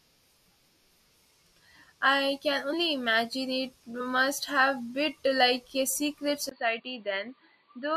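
At 6.49 s, right after "bit like a secret", a gap of about 20 ms opens and the speech comes back dull and boxy through to the end, with nothing above 4.6 kHz. It is also somewhat quieter and carries a faint new background noise well below the speech. The likely cause is an input switched to a poorer device. A plain filter or codec bandwidth drop would narrow the sound without also bringing the gap, the level change and a different noise floor.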